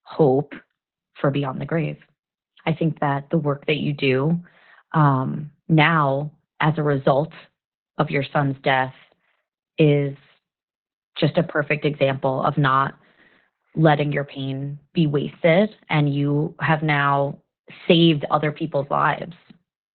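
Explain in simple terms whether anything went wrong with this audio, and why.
Opus voice compression affects the whole clip, start to finish. The speech was squeezed hard into a phone-style band, cutting everything above about 4.3 kHz, and its fine detail was coded coarsely, so voices sound muffled, hoarse and slightly robotic.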